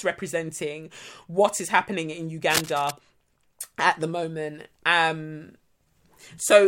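Right after "what is happening in", from 2.50 to 2.91 s, there's cable scratch noise: a dense, uneven burst of scratchy rustling sitting only a little below the speech. It's likely a worn cable or connector being moved, its contact resistance jumping around.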